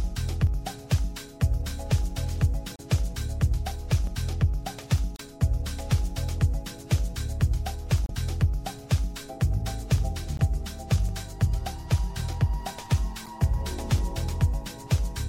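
At 2.76 to 2.80 s, 5.16 to 5.21 s, 8.06 to 8.11 s, 10.37 to 10.40 s and 13.25 to 13.28 s the audio breaks into a brief chirp or blip, each lasting roughly 25 to 45 ms. These are bursts of damaged data in a compressed stream. Corrupted bytes make the decoder misread the affected frames and lose sync until it finds the next valid frame header, so each one sounds like a short, harsh fragment cutting across the sound.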